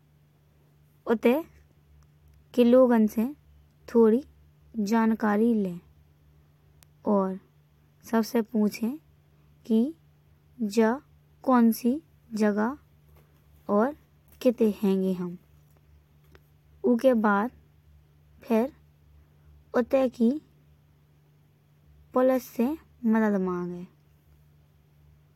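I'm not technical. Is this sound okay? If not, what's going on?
No. At 3.21 and 6.83 seconds, a single stored number in the digital audio got corrupted, one bit flipped. This is called a bit error spike. The sound jumps for an instant and snaps back, so you hear one sharp tick over the speech each time.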